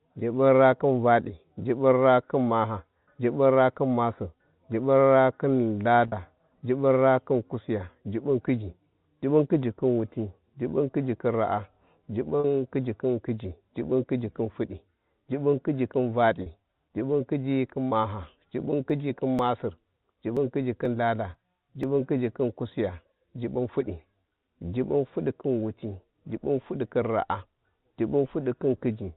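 Speech carried over G.711 mu-law telephone coding, so nothing above 4 kHz is present, suffers two kinds of fault. Network packet loss struck at 6.08 s, at 12.40 s just before "khiji khin kuiji", and at 16.42 s just after "khiji khin". Each gap of 40 ms, which fits two lost 20 ms packets, was bridged by repeating the last pitch period, so the sound briefly holds with a buzzy, frozen quality. From 18.90 s to 21.83 s, ending just before "kuiji khin", periodic USB or driver dropouts from something blocking the audio path every 0.49 s skip about 10 ms of audio each time, roughly seven times in all, giving evenly spaced ticks or pops while sound is present.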